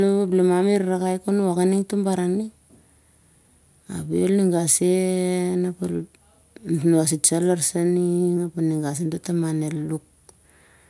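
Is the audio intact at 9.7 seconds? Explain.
Yes, the audio is intact at 9.7 seconds, with no audible fault at that point in the speech.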